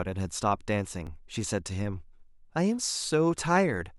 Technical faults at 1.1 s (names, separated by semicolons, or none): dropped buffer (overrun)